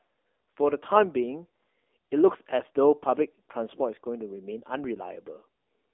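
From start to end, the speech passes through an AMR narrowband mobile codec. The line band runs from about 300 Hz to 3.5 kHz. Nothing higher survives, so the sound is thin and boxy. The codec models the voice with a small set of pulses per frame. At this rate the model is starved. The voice turns buzzy and synthetic. The damage is plainly audible and points to a low AMR-NB mode, around 7.4 kbps.

At 0.94 s, AMR bit errors strike for 0.11 s, until 1.05 s. Some less protected bits in the frames arrived flipped, at a rate of a few percent. The frames still decoded. But the driving pulses landed in wrong places, and fine pitch, gain and spectral values went astray. Pitch and level hold roughly steady. The voice turns hoarse, scratchy and gargly. The length fits about five 20 ms frames.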